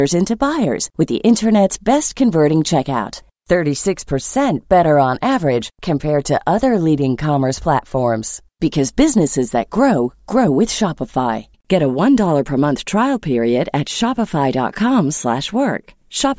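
No technical faults can be heard anywhere in this speech recording. There is nothing to place in time order, so no moments are marked.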